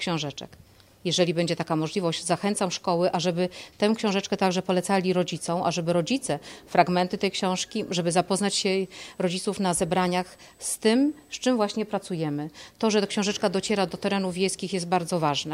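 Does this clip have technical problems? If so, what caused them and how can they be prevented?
Yes. Clock slip clicks run from 0.37 s to 15.52 s as faint, regular ticks. They come roughly every third of a second, about fifty in all. Each tick is a single sample being dropped or repeated. This likely comes from two devices running on separate, unsynchronised clocks. Their rates differ by roughly 70 ppm, so a whole sample of error builds up at a steady pace. To prevent it, lock both devices to one shared word clock or use asynchronous sample-rate conversion.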